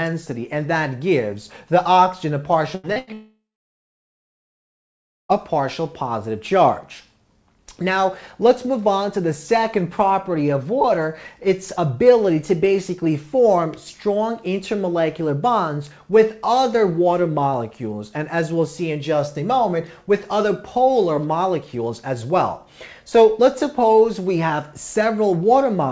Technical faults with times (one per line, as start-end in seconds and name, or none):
2.75-3.10 burst of packet loss
2.92-2.99 short concealed packet loss
3.13-5.32 long network dropout